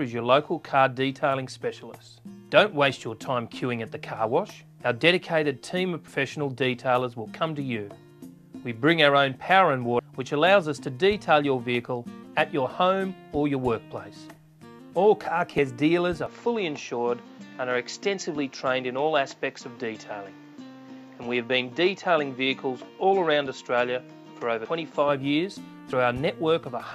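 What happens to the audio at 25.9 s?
At 25.92 s, compressed frames are skipped. Roughly 50 ms of audio is never decoded, which fits two dropped 24 ms frames, so the sound jumps ahead.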